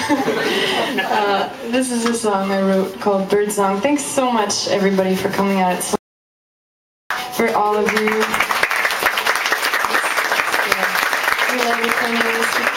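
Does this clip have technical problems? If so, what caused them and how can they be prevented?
Yes, there's an audio dropout to silence from 5.96 s to 7.10 s. The sound cuts off mid-flow and comes back just as abruptly, and for about 1.15 s in between there's nothing at all, not even room tone, so whatever happened in that stretch is simply gone. That silent gap likely means the input vanished for a moment while the recorder kept writing silence. Securing cables and checking mute states before rolling should prevent it.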